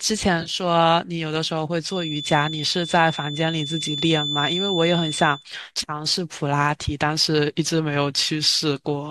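From 0.41 to 0.54 s there's AAC frame loss with concealment: about 70 ms of audio dropped in short bursts, which the decoder patched into a smeared, phasey blur. Then from 1.82 to 5.46 s a feedback whistle near 3.5 kHz hangs behind the speech, about 10 dB down, likely a speaker-to-mic loop sitting just at the edge.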